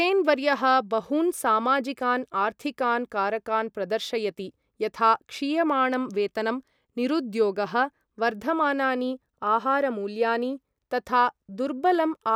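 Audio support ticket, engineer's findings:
Nothing to flag on this speech recording; listened all the way through and found no technical faults to chase, so no component needs attention here.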